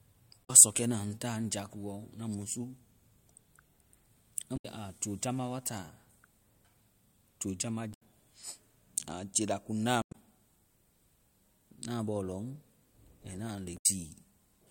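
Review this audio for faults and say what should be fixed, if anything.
Damaged data in a compressed stream corrupts this speech five times: 0.41–0.50 s, 4.53–4.65 s (just before "a jojamba wa"), 7.90–8.02 s, 9.99–10.15 s and 13.74–13.86 s. At each point the decoder misreads bad frames and loses sync, giving short chirps or squawks. On a spectrogram these look like broadband vertical smears, and on the waveform like abrupt discontinuities.

Re-fetch or re-encode from an intact source, and use checksummed or error-resilient transport so corrupted frames are caught before decoding.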